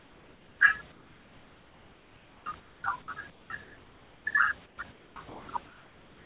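In the pauses at 0.0–0.6 s, 0.92–2.84 s, 3.3–4.26 s and 4.66 s to the end, the room background turns flat and featureless, about 4 dB quieter in the first pause. This is comfort noise in place of the background, likely synthetic noise filled in by the receiver while the sender stopped transmitting.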